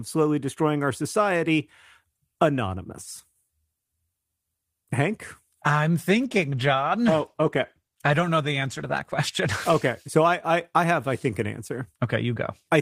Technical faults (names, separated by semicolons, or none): call bitrate drop